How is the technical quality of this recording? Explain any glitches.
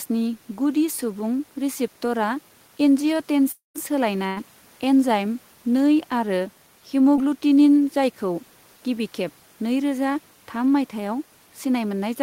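The recording has three network-related glitches, spread between about 3.5 and 7.2 s of the speech.

At 3.51 to 3.76 s there's what sounds like a long network dropout. About 240 ms of speech goes missing. The last sound is stretched into a fading buzz or hiss before it drops to near silence, and then the speech picks up further along. The likely cause is the stream stalling completely for a quarter second.

At 4.26 to 4.38 s there's a burst of packet loss. Around 100 ms never made it in time, so the receiver carried the previous sound forward and turned it down. You hear a brief held buzz or fading hiss, then the speech jumps ahead past the gap.

At 7.16 to 7.19 s there's a short concealed packet loss. Roughly 20 ms failed to arrive, and the decoder patched over it by extending the preceding sound before blending back in. It comes across as a tiny smear or wobble rather than an obvious gap.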